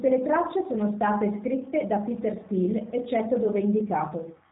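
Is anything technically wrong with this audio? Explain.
Yes. G.729 codec damage runs throughout the speech, from start to finish. This codec rebuilds each short frame from a vocal tract filter, a pitch predictor and a few coded pulses rather than the waveform itself, which fits an 8 kbit/s voice link. Nothing above about 3.8 kHz survives, so the speech sounds band-limited and muffled, and the plainly audible coding leaves it intelligible but rough and slightly synthetic.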